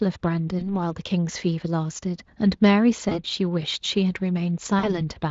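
At 0.59 to 0.64 s, 3.09 to 3.19 s and 4.79 to 5.02 s, the speech shows VoIP packet loss concealed by the speech codec. Roughly 20, 20 and 40 ms of audio went missing. The Speex decoder extended the last pitch and filter at falling gain. Each gap turns briefly into a stretched, fading sound, staying weak past the loss.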